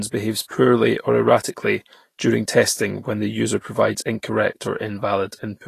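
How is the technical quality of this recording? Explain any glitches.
The recording has plainly audible coding damage throughout the speech. For the full length, a low-quality encode, likely Vorbis compression near 36 kbps, removes everything above 14.2 kHz and quantises the remaining treble so coarsely that fine detail turns to noise. The speech sounds hissy and grainy, with blurred attacks.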